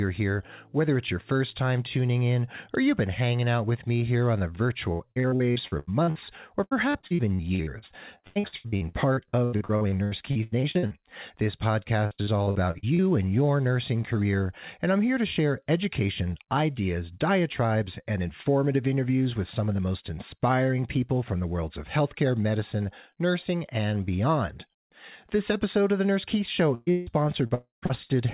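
From 4.92 to 10.93 s, right after "me here on the", the speech breaks up with repeated packet loss (robotic sound). Dozens of short holes, none longer than 83 ms, are each patched by stretching the last fragment, so about a third of the span is filled in. The result is choppy. The same chopping returns from 12.06 to 13.01 s, just before "and your nursing career", with gaps up to 47 ms. It appears again from 26.74 to 28.12 s, where one gap reaches 160 ms. What sets this apart from a single outage is the rapid on-off rhythm: real speech keeps poking through between the patches.

Inside that last stretch, from 27.54 to 27.85 s, the sound stops for a longer run. The last fragment is drawn out as a fading hum, and then there is about 130 ms of silence before the audio resumes with that part missing. This is likely a long network dropout. Unlike the chopping around it, it is one continuous hole that decays to nothing rather than a string of brief patches. 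Throughout the clip the call path carries nothing above 4 kHz, which fits G.711 mu-law.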